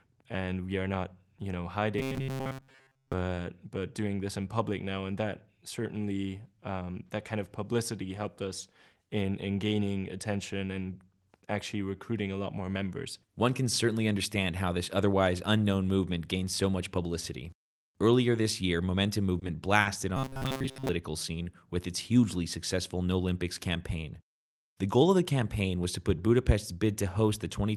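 Robotic sound from repeated short buffers appears from 1.99 to 3.13 s, right after "are not you know" and ending before "but doing this in", and again from 20.17 to 20.89 s, leading into "scene with its hugely". The speech turns into a rigid metallic buzz pinned near 133 Hz. The likely cause is audio arriving too seldom, so the receiver loops the last scrap of about 7.5 ms, which fits that pitch, over most of each stretch while the real audio is skipped.

Short stalls from late packets occur at 19.39 to 19.43 s and 19.81 to 19.87 s. In each, a packet missed its slot, the jitter buffer ran dry, and the receiver stretched the last sound, by 20 ms and then 40 ms, until the packet arrived. Nothing is lost, but the sound briefly hangs with a faint buzz or dip, and the playback delay grows by the same amounts.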